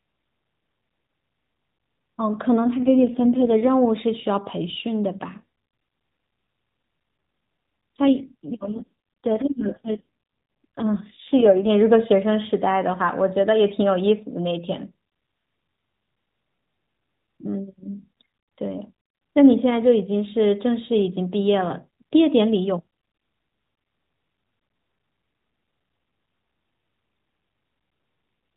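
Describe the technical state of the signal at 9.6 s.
At 9.6 s the speech sits inside an AMR rate drop running from 8.02 to 11.70 s. The sound turns rougher, buzzier and more synthetic, which fits the codec being pushed from its 12.2 kbps mode down to about 4.75 kbps to free bits for error protection. Fewer pulses per subframe leave the excitation coarse. On a spectrogram the narrowband 4 kHz ceiling stays put and the waveform shows no gap, but harmonics look smeared and formant detail blurred until 11.70 s.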